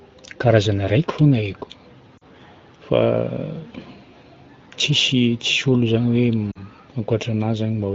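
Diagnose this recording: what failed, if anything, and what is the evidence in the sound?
Lost AMR speech frames, a radio-link fault hidden by concealment in the decoder. At 2.17 to 2.24 s and again at 6.52 to 6.59 s the speech briefly smears and dips for about 40 ms, which fits two consecutive 20 ms frames failing their checksum. The AMR-WB decoder, at 12.65 kbit/s, repeats the last good pitch and vocal-tract settings with falling gain. A spectrogram shows frozen, fading harmonic bands, and the waveform shows a short amplitude sag.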